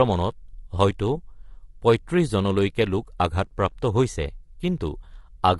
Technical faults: low-delay AAC compression; AAC frame loss with concealment

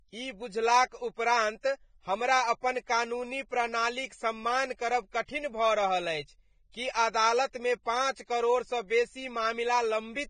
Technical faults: Vorbis compression

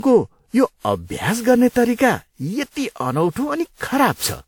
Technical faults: generation loss

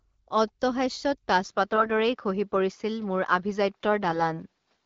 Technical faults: input switched to a poorer device; AMR bit errors

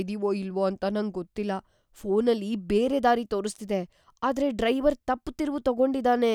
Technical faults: none

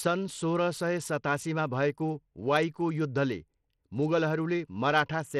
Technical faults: Bluetooth SBC compression

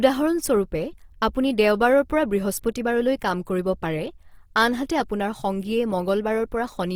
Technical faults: Opus compression

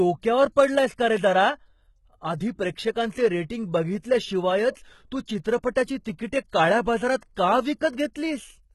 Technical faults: HE-AAC compression; pre-echo

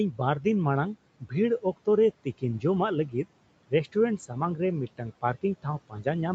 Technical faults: speech cut by the noise suppressor

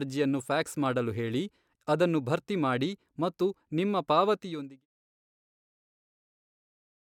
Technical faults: none

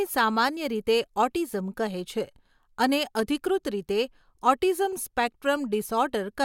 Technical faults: none

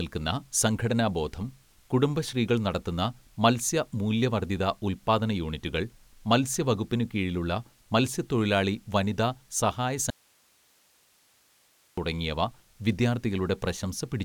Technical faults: audio dropout to a faint residue

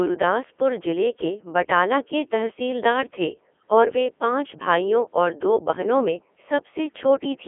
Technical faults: Codec 2 vocoder

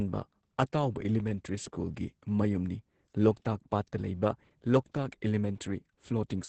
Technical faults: Opus voice compression

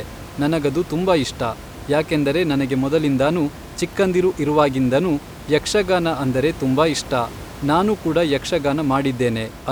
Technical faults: none

